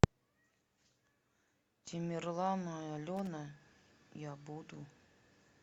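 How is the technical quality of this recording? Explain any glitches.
One glitch mars the speech. From 3.17 to 3.27 s a short, irregular burst of scratchy crackle cuts through, about a tenth of a second long. This is loose connector crackle: a worn or dirty contact intermittently breaking the signal path, chopping the audio.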